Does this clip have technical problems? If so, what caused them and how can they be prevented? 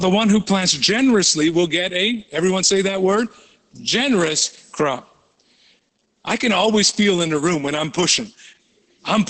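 Yes. Opus voice compression throughout: heavy SILK coding, fitting about 10 kbps, leaves speech hoarse and robotic, not merely muffled as a plain low-pass would, with nothing above 8.7 kHz. Encoding at a higher bitrate prevents it.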